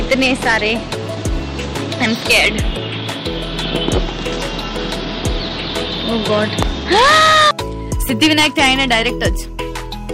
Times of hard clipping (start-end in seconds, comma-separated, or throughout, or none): 0.12-0.73, 2.02-2.49, 3.75-3.98, 6.13-7.51, 8.10-9.28